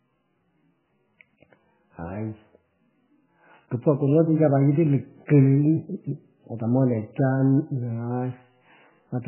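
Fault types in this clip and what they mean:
MP3 compression: The speech has nothing above 3 kHz, so sibilants and consonant detail are missing, and the remaining band sounds watery and swirly throughout, with weak spectral components flickering in and out between frames and onsets smeared. This heavy damage is likely the work of an MP3 encoder starved of bits, which fits a very low bitrate around 8 kbps, forcing it to cut the treble at a fixed point and discard quieter frequency lines.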